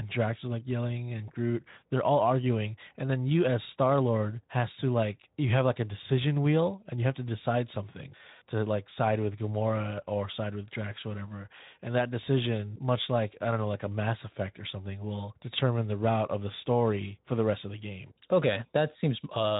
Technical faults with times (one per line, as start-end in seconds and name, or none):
none